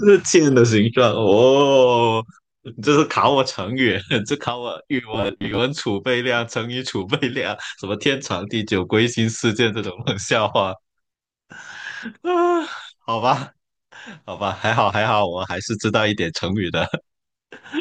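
From 5.14 to 5.59 s, new audio likely arrived too seldom, so playback filled the gaps by looping the last slice of about 10 ms, leaving roughly half that stretch as repeats. The result is robotic sound from repeated short buffers: a rigid 100 Hz metallic buzz loosely following the speech.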